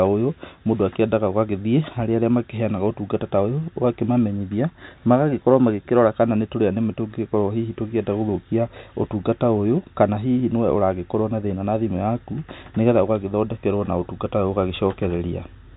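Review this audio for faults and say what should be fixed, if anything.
Nothing to fix: the speech carries the expected G.711 telephone coding, with its 4 kHz band limit and faint quantisation hiss, and no fault is audible anywhere in the clip.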